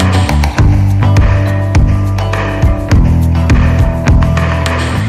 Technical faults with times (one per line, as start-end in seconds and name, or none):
0.00-5.08 hard clipping